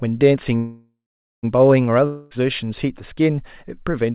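A call audio freeze runs from 0.56 to 1.45 s: the last sound stretches into a fading buzz, then about 0.45 s of silence, likely because delayed packets emptied the jitter buffer; the audio resumes intact, about 0.87 s late. A long network dropout follows at 2.07 to 2.33 s, where a fading buzz fills the gap and about 0.24 s of sound, likely lost in transit, never returns. Both play over telephone-band audio with nothing above 4 kHz, which fits a G.711 call codec.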